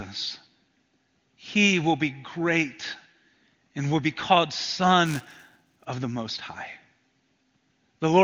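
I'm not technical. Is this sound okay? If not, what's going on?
No. From 5.06 to 5.86 s, right after "and will be called" and just before "of the", the speech picks up a steady robotic buzz at 375 Hz. This is buffer tearing: the software filling the audio buffer and the hardware playing it have fallen out of step, so each tiny chunk carries a sliver of sound from a few milliseconds earlier, with hard joins. The buzz rate fits a 128-sample buffer. The HD Voice phone coding underneath is audible only as a top end stopping near 7 kHz.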